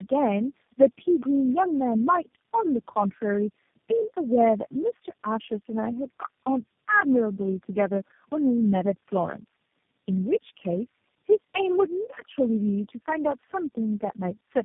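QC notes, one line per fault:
Throughout: tandem speech coding. The speech passed through four speech codecs in a row, AMR-NB at 5.15 and 5.9 kbit/s, CVSD and G.729A at 8 kbit/s, with G.711 links between them. Each one re-encoded the last one's already degraded output, so the errors compound. The result is rough, muffled and warbly, with nothing above 3.6 kHz. A spectrogram shows a hard ceiling there, smeared formants and blurred harmonics.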